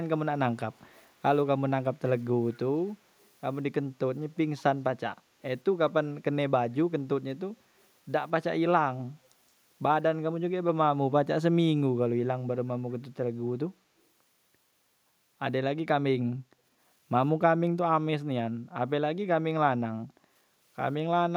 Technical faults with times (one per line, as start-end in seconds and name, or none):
0.73-1.09 echo leak
3.20-3.27 echo leak